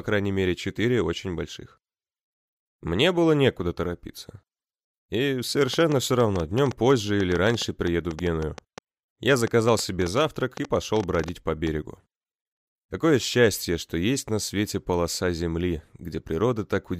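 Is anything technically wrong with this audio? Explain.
Yes. From 5.74 to 11.68 s a train of clicks, some forty uneven pulses at 6.7 per second, likely from interference, ticks about 10 dB above the sound.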